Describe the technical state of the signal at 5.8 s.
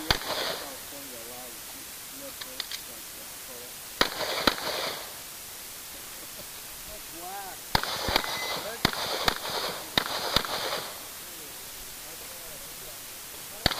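At 5.8 s the signal carries low bit depth with dither, which runs through the whole clip. The audio is held at just 6 bits, and dither added before rounding turns the coarse quantisation error into a steady white hiss sitting only a few decibels below the signal. Unlike undithered bit reduction, which tracks the signal and makes it sound gritty or buzzy, this hiss stays constant and even, with no distortion.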